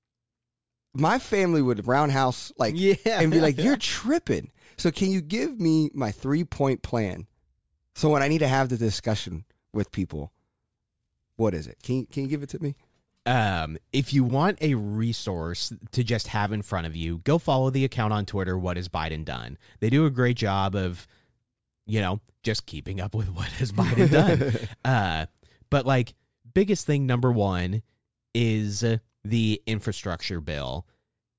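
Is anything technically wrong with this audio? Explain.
No, nothing technically wrong can be heard in this speech recording. It holds steady throughout, with nothing that points to a problem in how it was captured, processed or played back.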